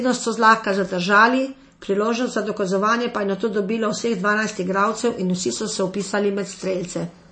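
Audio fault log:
Throughout: MP3 compression, likely at a low bitrate near 32 kbps. The speech has a hard ceiling at 8.3 kHz and a plainly audible watery, swirling texture as weak frequency lines drop in and out between frames. That flicker separates it from a simple low-pass filter.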